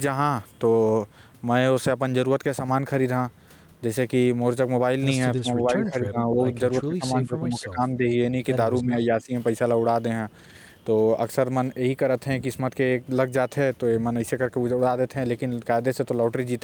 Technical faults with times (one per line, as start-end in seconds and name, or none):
5.36-6.51 speech suppressed in double talk
6.80-8.06 speech suppressed in double talk
8.81-9.32 speech suppressed in double talk